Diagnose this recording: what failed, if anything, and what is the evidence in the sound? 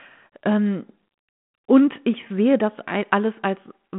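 Nothing has failed: the speech sits in the expected 150 Hz to 3.4 kHz telephone band, carrying only the light coding texture of a 32 kbit/s narrowband link, with no dropout, distortion or timing disturbance anywhere in it.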